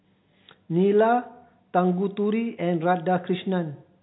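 Nothing stood out on listening to this speech clip beyond the narrow telephone band of its G.711 coding, with nothing heard above about 3.9 kHz.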